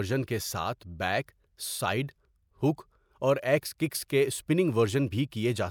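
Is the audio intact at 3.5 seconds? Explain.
Yes, the audio is intact at 3.5 seconds, with no dropout, click, distortion or other fault at that moment.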